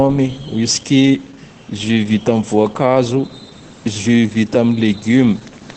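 Across the whole speech clip runs Opus voice compression, and the damage is plainly audible. Nothing reaches above about 8.8 kHz, the wideband ceiling of the SILK linear-prediction coder, and the coarse coding of the excitation gives the voice a hoarse, faintly robotic grain that points to a rate near 12 kbps. A simple low-pass filter would only muffle the top; here the texture of the voice itself is roughened, which marks it as codec damage.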